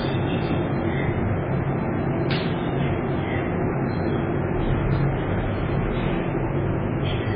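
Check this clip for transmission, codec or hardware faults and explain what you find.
One codec fault runs through the whole clip. Throughout, the sound shows likely MP3 compression damage. Nothing survives above 5 kHz. Weak detail flickers, giving a watery, swirling texture and smeared attacks. This fits a starved bitrate around 16 kbps.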